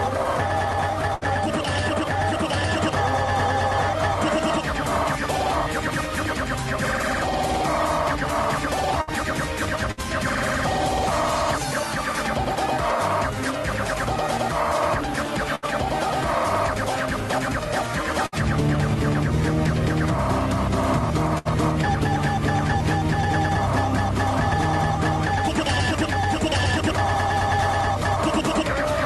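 Burst of packet loss at 1.15, 9.01, 9.91, 15.55, 18.26 and 21.38 s: each time, about 60 ms of audio never arrived in time. The receiver filled the gap by extending the last sound for roughly 60 to 70 ms while fading it down, so each spot is a brief buzz or dimming hiss. The sound then picks up later, with about 60 ms skipped. The call codec's top end stops near 12 kHz.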